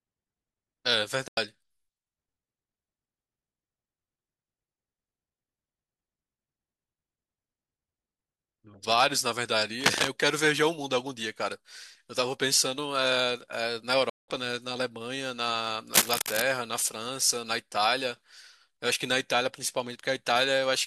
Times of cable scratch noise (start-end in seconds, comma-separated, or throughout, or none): 9.79-10.08, 15.93-16.42